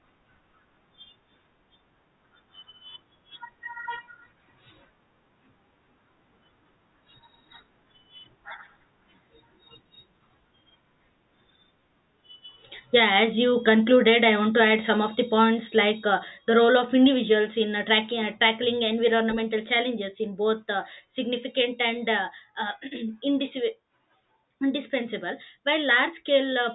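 Nothing technically wrong can be heard anywhere in this speech recording.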